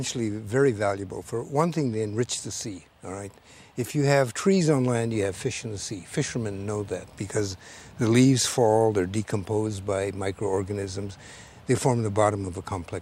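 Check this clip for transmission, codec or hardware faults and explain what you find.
No transmission, codec or hardware faults turn up anywhere in the recording.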